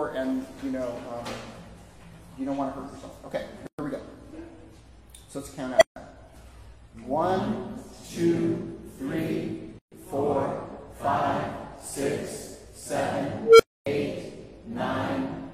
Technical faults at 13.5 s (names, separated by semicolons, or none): unstable filter